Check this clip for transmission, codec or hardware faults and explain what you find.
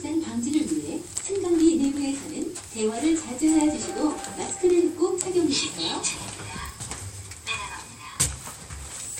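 A filter restarted on every block affects the sound from 1.30 to 4.74 s. Its state resets each block, so each one starts with a small transient. This gives a buzz near 43.1 Hz that tracks the level, fitting 1024-sample blocks. A spectrogram shows evenly spaced vertical lines about 23 ms apart, and the waveform shows matching spikes.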